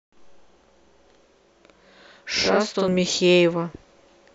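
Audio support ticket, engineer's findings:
Channel delay (doubling), 0.00–2.88 s. Speech heard twice, equal level, slap about 46 ms late. One channel lags, fits a 2048-sample buffer, then summed to mono.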